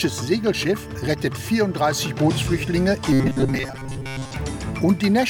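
From 3.13 to 4.36 s the sound turns rigid and metallic, locked onto a steady buzz at 133 Hz that only loosely tracks the underlying audio. This is robotic sound from repeated short buffers, likely caused by new audio arriving too seldom, so the playback filled the gaps by looping a fragment of roughly 7.5 ms. Most of that stretch is repeated material rather than fresh audio, and the loop period imposes the fixed pitch.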